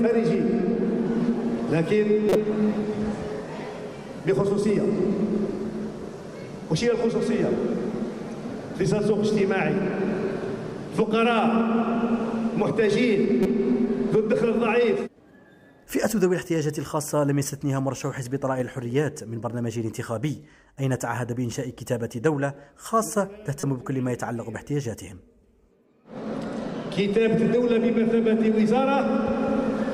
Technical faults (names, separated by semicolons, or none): corrupt frame decoded